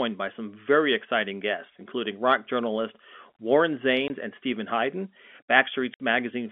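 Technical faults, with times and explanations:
4.08–4.10 s and 5.94–6.00 s, packet loss filled with silence: the speech drops out abruptly, first for 20 ms and then for 60 ms, with hard edges where the sound stops and restarts. The receiver had nothing to play for these stretches and inserted digital silence instead of concealing the gap. The lengths point to 20 ms packets, one missing and then three in a row, carried over the narrowband telephone-coded line.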